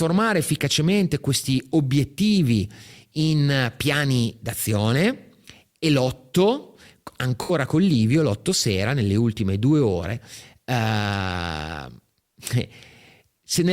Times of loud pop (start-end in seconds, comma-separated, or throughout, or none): none